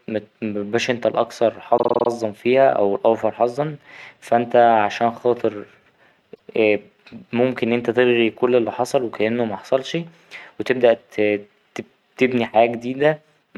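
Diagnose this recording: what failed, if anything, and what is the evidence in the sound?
The fault is repeated frames in the compressed stream, at the codec or storage stage. From 1.77 to 2.08 s a 52 ms block of the speech plays six extra times, a rapid stutter that adds 0.31 s. At 6.34 to 6.49 s a 157 ms block plays once more, adding 0.16 s. On a spectrogram, identical short slices sit side by side, and the waveform shows copies of the same segment.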